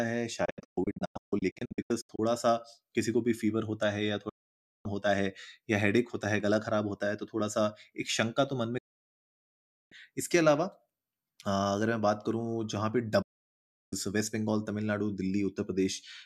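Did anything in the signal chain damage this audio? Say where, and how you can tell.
Yes, a digital broadcast dropout at reception. The audio fades out in about 8 ms and mutes at 0.45–2.19 s as several short holes, the longest 144 ms, then again at 4.29–4.86, 8.78–9.92 and 13.22–13.93 s. The receiver muted on bad frames, so that programme is gone.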